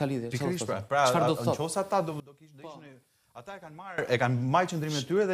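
From 2.2 s to 3.98 s the sound suddenly drops by about 20 dB. What remains is faint. Nearly everything, background included, vanishes. The likely cause is one channel inverted. One stereo channel has had its polarity flipped. When the two channels are summed to mono, everything they share cancels. Only the difference between them survives, heard here as a faint trace. Full level returns at 3.98 s.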